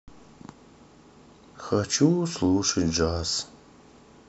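No technical faults are audible.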